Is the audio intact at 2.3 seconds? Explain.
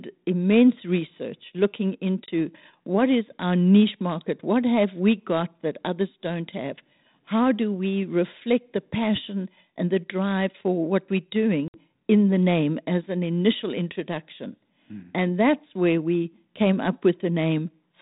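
No. From 2.26 to 2.29 s there is packet loss on an ADPCM call: about 20 ms, roughly one packet, is missing and filled with silence, leaving a hard-edged hole. Because the decoder's adaptive predictor and step size lose track of the sender's, the sound resumes with some distortion that settles over some tens of milliseconds. That uneven recovery separates it from a plain dropout, which resumes cleanly.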